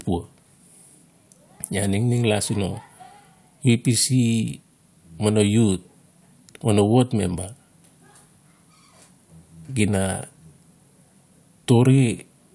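No technical faults are audible.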